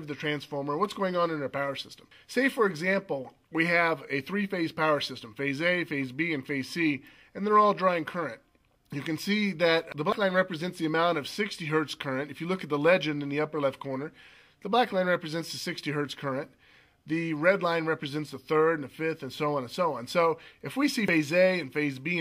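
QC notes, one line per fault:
10.12 s and 21.08 s, dropped buffer (overrun): at each point there is an abrupt forward jump in the sound and no gap of silence, with roughly a tenth of a second missing each time. The likely cause is the recording software falling behind, so the hardware overwrote a block of samples before it was read. The audio on either side of the lost block is then butted together, and that hard splice makes the jump.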